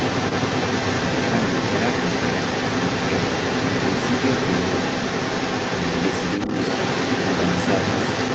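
From the start to the end at about 8 s, a second voice runs alongside the talker. This is the other side's voice leaking through: the far end, played on the talker's loudspeaker, was likely not fully removed by the echo canceller. It sits at roughly the talker's own level or a little above. It differs from a nearby background talker because it shares the call's 8 kHz band limit and has the same processed texture.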